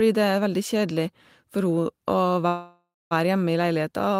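Speech, with a call audio freeze from 2.47 to 3.13 s: the last sound is held as a fading buzz, then about 220 ms of silence, before speech resumes where it stopped, roughly 0.64 s late with nothing lost. Delayed packets likely emptied the jitter buffer.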